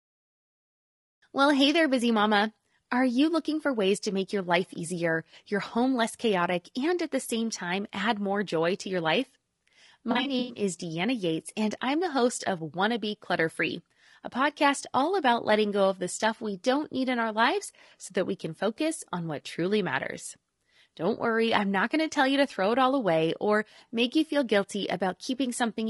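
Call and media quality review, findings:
Rough, grainy speech throughout, noise filling gaps between harmonics, synthetic-sounding top band. Likely low-delay AAC compression (AAC-ELD) near 32 kbps; the grain tracks the voice rather than sitting as steady background hiss.

10.11–10.63 s: smeared, noisy, phasey patches, not clean gaps. AAC frame loss with concealment. About 260 ms lost, scattered over roughly 440 ms, fits about a dozen frames. Runs near 100 ms at most.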